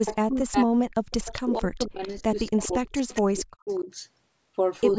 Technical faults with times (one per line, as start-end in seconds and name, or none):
0.00-0.87 speech suppressed in double talk
0.05-0.15 echo leak
1.10-1.41 echo leak
1.32-3.90 speech suppressed in double talk
2.03-2.10 echo leak
2.46-2.60 echo leak
3.69-3.80 echo leak